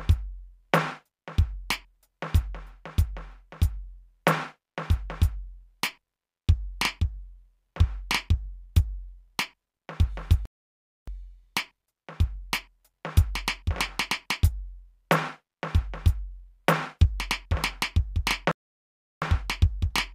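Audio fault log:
10.45–11.08 s and 18.51–19.22 s, playback stall: the music cuts off mid-flow for about 0.62 s and then 0.70 s before resuming, likely because the player ran short of data or its thread was blocked. The waveform drops abruptly to a flat line and the spectrogram shows blank vertical bands.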